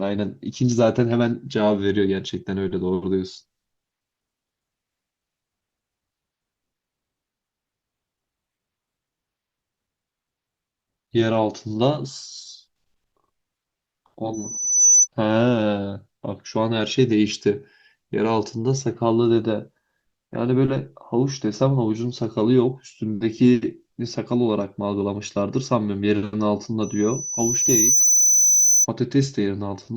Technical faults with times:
14.33-15.08 loudspeaker feedback squeal
26.83-28.87 loudspeaker feedback squeal

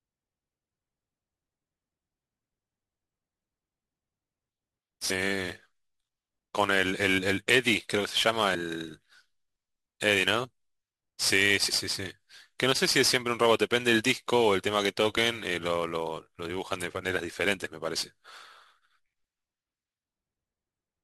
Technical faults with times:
0.00-21.04 sample clock jitter
5.09 compressed frames skipped
7.17 compressed frames skipped
8.54 compressed frames skipped
11.68 compressed frames skipped
15.17 compressed frames skipped

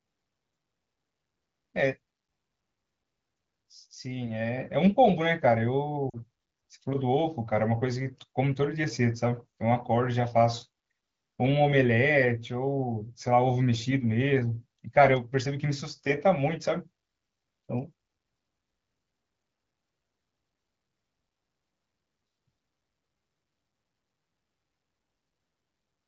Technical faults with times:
6.10-6.17 lost AMR speech frames

